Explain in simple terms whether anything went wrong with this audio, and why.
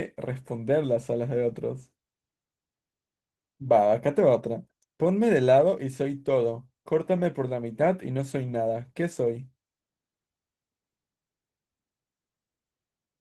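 Opus voice compression affects the whole clip, from start to finish. The speech was squeezed into very little data, so the encoder kept only a rough outline of the voice and coded the upper frequencies separately, leaving a plainly audible hoarse, slightly robotic roughness.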